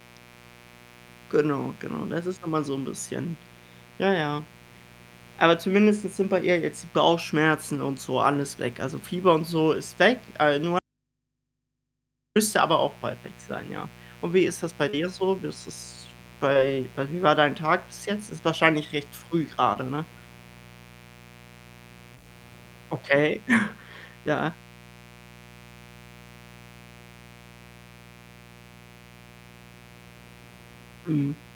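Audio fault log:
throughout: mains buzz. A steady, raspy 60 Hz buzz sits about 25 dB below the speech. Switching spikes twice per cycle spread harmonics into several kilohertz.
10.79 to 12.36 s: audio dropout to a faint residue. The speech cuts out abruptly for about 1.56 s, likely from the signal being lost while the path stayed live. Only hum remains, about 55 dB down.
14.89 to 14.95 s, 16.53 to 16.57 s, 19.73 to 19.77 s, 22.15 to 22.18 s: short concealed packet loss. Each 20 to 40 ms hole was filled by extending the last sound, then blended back, heard as a brief smear.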